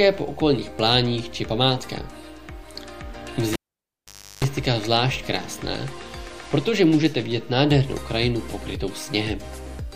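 At 3.53 s a sharp pop cuts the sound away, leaving near silence for about 0.86 s, broken by a coarse 50 Hz mains buzz lasting roughly 0.35 s, before a second pop at 4.44 s brings the audio back. This is a cable pulled and plugged in while live: the first pop marks the break, the buzz comes from the plug's tip touching before the shield connects, and the final pop is full reconnection.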